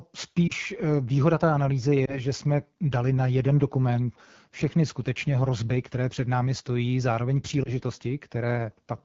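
Speech coded with the AMR wideband (HD Voice) codec at 8.85 kbit/s, one of its two lowest rates, where the pulse-excited vocal tract model has too few bits for the excitation. The voice is plainly rough and raspy, and the band above 6.4 kHz is filled with shaped noise rather than real detail. Lost AMR speech frames cause brief dips or warbles at 0.47–0.52 s, 2.05–2.20 s and 7.64–7.70 s. Each sounds like a single 20 ms frame dropped by a radio error, which the decoder concealed by repeating the last good pitch and vocal tract settings at reduced gain before the voice recovered.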